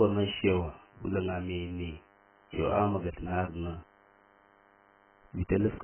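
From the first moment to the last, a DECT cordless phone buzz sits under the speech. A handset or base station nearby is transmitting a radio burst every 10 ms, and the audio circuitry rectifies each burst, turning it into a thin, steady buzz at 100 Hz, roughly 30 dB below the speech. On a spectrogram it forms a comb of evenly spaced horizontal lines at 100 Hz and its harmonics, running unbroken through pauses. On a zoomed waveform it shows as a regular pulse train.

Also present across the entire clip, the speech sounds dull, smeared and warbly, with fizzy, watery sibilants. The likely cause is heavy AAC compression. The damage fits AAC-LC at a very low bitrate, around 10 kbps, where the encoder discards most of the spectrum to meet its bit budget. On a spectrogram, nothing appears above 3.1 kHz, leaving a flat ceiling, and the band below it is patchy, with holes and blurred, blocky smears in place of sharp harmonic detail.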